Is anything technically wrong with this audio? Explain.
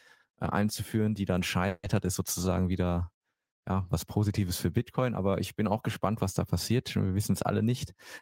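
Yes. From 1.67 to 1.86 s there is a call audio freeze: the speech stops and the last sound carries on for about 160 ms as a fading buzz or hiss, then roughly 40 ms of silence. The likely cause is delayed packets draining the jitter buffer, so the receiver stretched the final fragment until data returned. The speech then resumes where it left off with nothing lost, only pushed about 160 ms later. On a spectrogram, the last spectral frame smears horizontally into a short band that dims before a blank strip. On the waveform, a decaying repetitive section narrows to a flat line.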